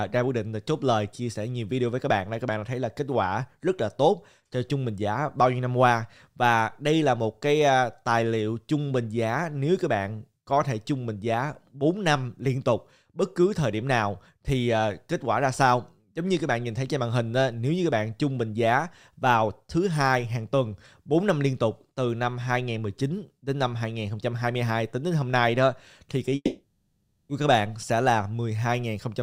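At 26.35 s the stream most likely suffered a long network dropout: packets stopped arriving for just under a second, until 27.31 s, and that stretch of audio was never delivered. The receiver tried to cover the hole by stretching the last sound it had into a smeared, buzzy tone that decays away, leaving a brief stretch of near silence. The audio then resumes at 27.31 s, with the lost portion simply gone.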